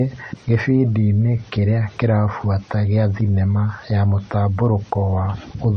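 Speech with two faults. It was likely encoded as low-bitrate MP3, around 34 kbit/s, then re-saved at a high bitrate. Nothing remains above 9.4 kHz, and the artefacts of that first pass are still audible throughout. From 0.52 to 0.83 s, a stage was driven about 2 dB past its limit, and the resulting hard clipping flattens the peaks and adds a brief crackle on peaks.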